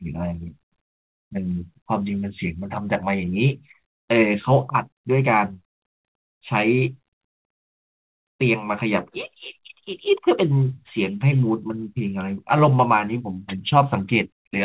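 Speech, with no technical faults to report.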